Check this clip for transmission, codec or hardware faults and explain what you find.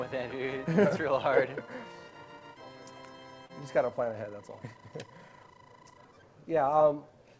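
One transmission fault stands out: a short stall from a late packet, from 3.46 to 3.52 s. The sound there is briefly held and smeared, with a faint buzz or dip instead of clean movement, and then carries on with nothing skipped. A packet arrived late, the jitter buffer ran dry, and the receiver stretched the last audio by about 38 ms to cover the gap. Once the packet arrived, playback resumed from the same point, now 38 ms later.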